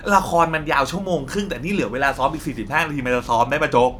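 No technical faults can be heard anywhere in this speech recording.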